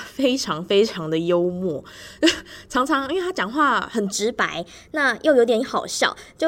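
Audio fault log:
4.12–6.47 s: section at the wrong speed. From 4.12 s to the end, the speech runs about 1.13 times faster than the opening, and its pitch rises with it by about two semitones, so the voice turns higher and more hurried at once. Speed and pitch shift together because the samples are being played out at a faster rate than they were captured, most likely an edit or playback step locked to the wrong clock for this last stretch.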